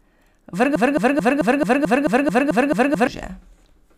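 A broken-record loop runs from 0.76 to 3.07 s. A single 219 ms fragment of speech repeats exactly eleven times, back to back, as a rapid mechanical stutter. The stream likely stalled and kept resending its last held piece, losing the speech due then.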